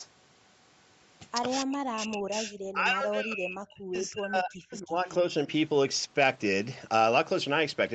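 From 1.64 to 2.54 s and again from 2.72 to 5.24 s the speech dips by up to about 40 dB, likely speech suppressed in double talk: the echo canceller mistook it for loudspeaker echo. Unlike packet loss, the level is turned down rather than replaced by clean gaps. Throughout, the band stops at 8 kHz from the Opus call path.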